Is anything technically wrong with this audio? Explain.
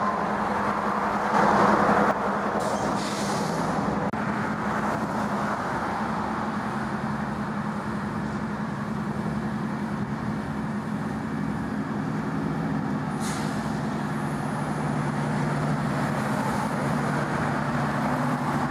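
Yes. From 1.34 to 2.11 s there is a sudden gain jump: the digital gain was likely switched in a single sample step with no ramp. The sound and its background noise both rise abruptly by about 6 dB, then drop back just as abruptly.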